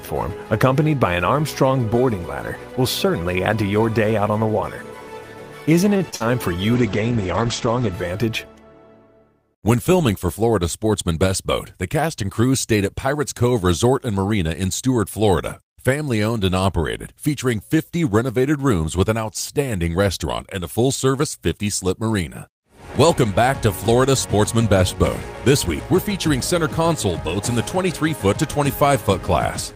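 At 5.97 to 6.02 s there is a short stall from a late packet. A packet arrived after its playout time, the jitter buffer ran dry, and the receiver held the preceding sound for about 26 ms until the data turned up, then resumed from the same point. Nothing is lost, but the sound lingers slightly too long, and the overall delay grows by that 26 ms.

Immediately after come two instances of short concealed packet loss, at 6.10 to 6.14 s and 6.16 to 6.22 s. Here the data never reached the decoder in time, about 20 ms in the first gap and 40 ms in the second. The decoder extrapolated the last sound to cover each hole and then crossfaded back into the real signal. The result is a brief smeared, wobbly patch.

From 6.76 to 8.00 s there is a call bitrate drop. The bandwidth estimate fell, and the encoder was throttled from 32 kbps to 11 kbps, staying at the lowest rate for about 1.2 s. At that rate Opus quantises coarsely and also narrows the coded audio band from 20 kHz to 8 kHz. 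The sound becomes duller and rough or watery, losing its top end, until the bitrate climbs back at 8.00 s.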